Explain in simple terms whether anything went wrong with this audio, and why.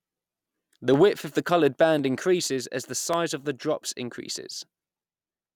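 Four sharp clicks interrupt the speech, at 0.94 s (just before "width of the coloured"), 1.99 s, 3.14 s (between "increases as the" and "of the drops") and 4.30 s (right after "of the drops"). These are likely dropped samples: a sliver of audio under half a millisecond went missing, so the sound jumps abruptly and snaps. Unlike a dropout, which leaves an audible gap of silence, nothing is lost to the ear here, only a brief tick.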